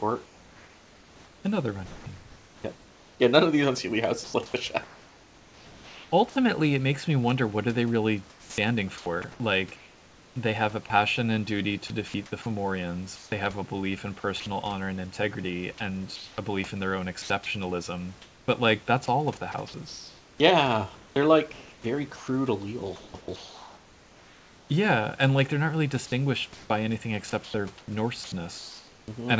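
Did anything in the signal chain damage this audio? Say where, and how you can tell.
Yes. Sound chopped by the voice detector (call processing) at 0.26–6.12, 8.30–14.46, 16.16–24.70 and 26.54–29.08 s; the spectrogram shows speech edges swapped for flat, featureless noise, likely from comfort-noise insertion.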